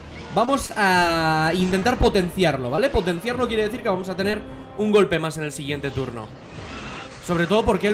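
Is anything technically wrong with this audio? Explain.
Yes, there are two kinds of network fault.

Short concealed packet loss occurs five times, at about 0.45, 0.99, 1.80, 2.76 and 4.31 s. Each time, about 20 ms of audio never reached the decoder. The receiver patched the gap with 17 to 20 ms of synthesised continuation of the preceding sound, then blended back into the real signal. At 2.76 s the concealment adds roughly 5 ms. Each spot is a brief smear or wobble, and a short sound there can drop out.

A short stall from a late packet occurs from 0.67 to 0.71 s. A packet arrived after it was due, so the jitter buffer ran dry. The receiver stretched the last sound by 22 ms until the packet came in, then resumed from the same point. Nothing is lost, but the sound is held too long, and everything after it plays 22 ms later than before.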